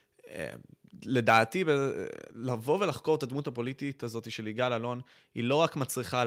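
From 1.29 to 1.38 s the speech picks up a harsh, crackling edge on its loudest moment: the peaks sound flattened and gritty rather than round. This is microphone overload, likely caused by the input gain being set too high, so the signal tried to rise about 3 dB past the converter's ceiling and had its tops sliced off. Only a small share of samples is affected, roughly one and a half percent.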